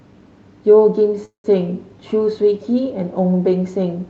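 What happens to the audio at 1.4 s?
At 1.4 s the speech is inside a call audio freeze running from 1.25 to 1.46 s. The likely cause is late packets draining the jitter buffer, so the receiver stretches the last sound into a fading buzz for about 190 ms, ending in roughly 120 ms of silence. Then the speech resumes where it stopped, nothing lost, just delayed. On a waveform this looks like a decaying smear flattening to near zero. On a spectrogram, smooth repeated bands dissolve into a blank gap, capped at 8 kHz by the call codec.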